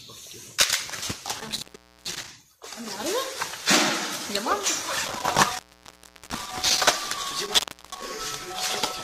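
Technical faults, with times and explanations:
1.40–2.28 s, 5.05–6.85 s and 7.45–8.06 s, intermittent contact: a loose connection briefly opens, dropping the sound for about 0.44 s, 0.72 s and 0.34 s with crackle at each edge. The waveform collapses to a near-flat line of faint hiss, bracketed by broadband vertical streaks on the spectrogram.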